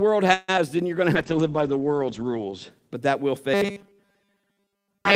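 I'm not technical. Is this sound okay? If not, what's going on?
No. At 0.33 to 0.50 s the speech stops for about 150 ms and is stretched with a fading hum before continuing from where it left off. That is a call audio freeze, likely from data held up in transit.

Just after, at 0.56 to 0.59 s, there is a brief smear where about 20 ms of speech never arrived in time. This is short concealed packet loss: the receiver covered the hole with a guessed continuation of the preceding sound.

From 1.16 to 2.76 s the speech turns muffled and rough, with the top end cut from 20 kHz down to 8 kHz. This is a call bitrate drop: the connection looked weaker, so the sound was sent with much less detail.

From 3.54 s to the end the speech becomes a stiff metallic buzz at 200 Hz. This is robotic sound from repeated short buffers, likely caused by a 5 ms chunk being replayed over and over while most of the real audio was skipped.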